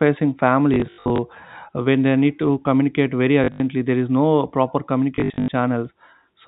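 Speech carried over G.711 telephone coding, so the band stops at 4 kHz. It has three bursts of packet loss with the last packet repeated, at 0.74 to 1.18 s, 3.44 to 3.6 s and 5.16 to 5.48 s. Missing audio is covered by replaying the previous packet, giving a brief robotic buzz on runs up to 80 ms. The losses total about 240, 120 and 220 ms, which fits 20 ms packets.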